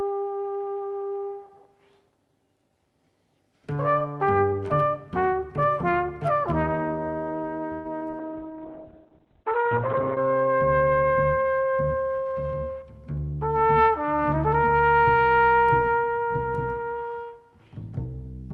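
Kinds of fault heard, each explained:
Call audio freeze: From 7.73 to 7.87 s the sound stops advancing and the last moment is stretched into a fading buzz for about 114 ms. Late-arriving packets likely emptied the jitter buffer. Nothing is lost, and a spectrogram shows smeared, decaying bands before the audio resumes where it left off.
Short concealed packet loss: At 7.99 and 8.11 s, 20 ms of audio never reached the decoder and was patched by extrapolating the preceding sound. Each gap is a brief smear or wobble. On a spectrogram the harmonics blur slightly for one narrow strip before the real signal returns.
Call bitrate drop: From 8.20 to 10.25 s the encoder falls from 40 to 7 kbps and stays at the low rate for nearly two seconds. The bandwidth shrinks from 12 kHz to 4 kHz, so the sound turns muffled and watery. A spectrogram shows everything above 4 kHz abruptly gone.
Jitter buffer speed-up: Between 12.18 and 12.83 s the receiver trims an excess backlog by cutting out short pitch-period pieces, about a tenth of a second altogether. 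Playback runs at 116% with pitch unchanged, sounding hurried. The waveform shows fewer periodic cycles of unchanged length, with no gaps.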